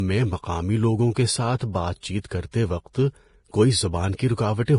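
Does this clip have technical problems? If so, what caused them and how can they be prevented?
Yes. The speech was likely encoded with Vorbis at a low quality setting, which fits a bitrate near 30 kbps. The encoder removes everything above 10.5 kHz and quantises the remaining treble coarsely, so the high end sounds hissy and grainy. Encoding at a higher quality setting prevents this.

Pre-echo comes from the same transform coding, which spreads quantisation noise evenly across each block. Noise sized for a sharp attack therefore leaks into the quiet just before it. A short hiss precedes attacks at 2.19 to 2.24 s, 2.29 to 2.31 s and 4.16 to 4.19 s, smearing each onset by 25 to 49 ms. A higher bitrate, with its finer quantisation and quieter noise, prevents it.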